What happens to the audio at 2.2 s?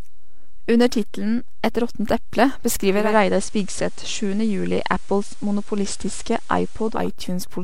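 At 2.2 s the speech sits on a DC offset, which runs through the whole clip. The entire waveform is pushed off zero by a fixed amount. You cannot hear it directly. It eats into headroom and adds steady energy at the very lowest frequencies.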